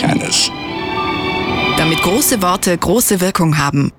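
Sample clock jitter runs through the whole clip. The converter's timing wanders by around a microsecond, so each sample lands slightly off its proper instant, and the resulting error sits roughly 35 dB under the sound itself. It comes through as a fine hiss or grain that swells on loud, bright passages and disappears in quiet gaps. A steady noise floor would stay put, but this roughness tracks how fast the waveform is changing.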